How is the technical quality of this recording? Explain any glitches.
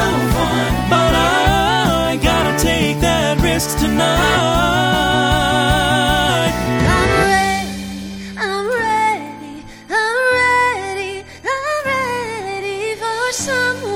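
No glitches or technical faults can be heard here.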